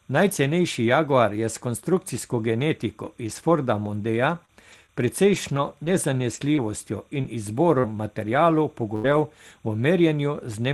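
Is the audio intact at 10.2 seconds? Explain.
No. Linear timecode running at 30 frames per second is leaking in from a neighbouring track or cable for the whole clip, including 10.2 s. Its square-wave switching between roughly 1 kHz and 2 kHz leaves a faint chirping warble, around 40 dB below the speech.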